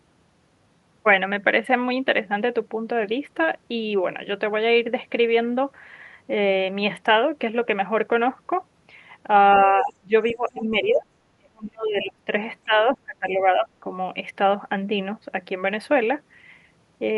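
The echo canceller likely misjudged double talk, so speech suppressed in double talk dips by roughly 20 dB from 9.57 to 10.13 s. From 10.28 to 10.49 s, residual echo likely went uncancelled, letting the other side's voice leak through faintly, about 25 dB below the talker. The canceller likely kept ducking the talker through further double-talk stretches at 10.31 to 11.06 s, 11.29 to 12.31 s and 12.65 to 13.86 s, sagging roughly 20 to 30 dB, deepest in the middle stretch.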